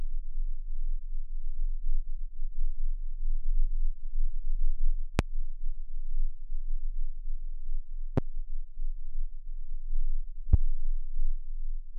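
Loud pops at 5.19–5.22 s, 8.18–8.20 s and 10.53–10.56 s, each a single sharp thump peaking roughly 15 to 20 dB above the sound, which continues underneath. The likely cause is a sudden voltage step from a switch, plug, static or driver glitch.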